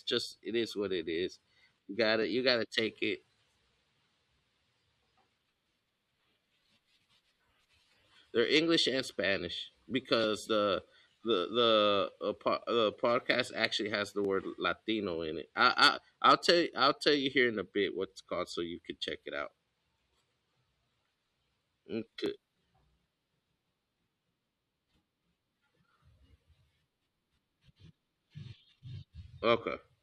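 Speech with overlapping chunks: a click or stutter recurs every 4.0 s, at 2.23, 6.23, 10.24, 14.25, 18.25, 22.26 and 26.27 s, for example just before "you got to take" and between "in a bit what's" and "so you can check". Each 4-second chunk begins about 7.07 ms before the previous one ended, so that sliver plays twice. Unlike dropouts, nothing is missing: a tiny piece is duplicated, on a strict clock.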